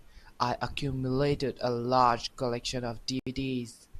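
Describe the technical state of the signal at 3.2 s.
At 3.2 s the speech is in a digital broadcast dropout running from 3.19 to 3.27 s. The receiver stopped getting decodable frames, either because the signal was lost or because frames failed their checksum, so it muted its output until valid data returned. The sound cuts or quickly fades to silence for about 72 ms, consistent with roughly three lost frames, then resumes mid-stream. Whatever was transmitted during that gap is gone.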